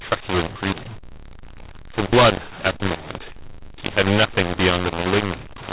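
Throughout, mu-law and A-law are mixed up: mu-law telephone samples decoded as A-law scramble levels, giving harsh, distorted speech and noise-filled pauses within the 4 kHz band.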